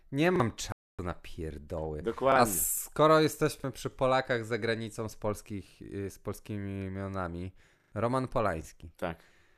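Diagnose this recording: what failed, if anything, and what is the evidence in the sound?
Repeated buffer, at the driver or buffer stage. Short stutters at 0.36 s, 2.32 s (after "na pierdoły") and 3.6 s each replay a 40 ms piece once, with hard joins. At 7.8 s, after "y z polskimi imionami", the piece sounds three extra times. New audio arrived late, so the last block played again. That fits a 40 ms buffer.

Digital broadcast dropout, at the reception stage. From 0.72 to 0.99 s the speech cuts to silence for 264 ms. It returns on "na pierdoły". The receiver lost the signal or rejected corrupt frames, and muted until good data came back. What was sent during the gap is lost.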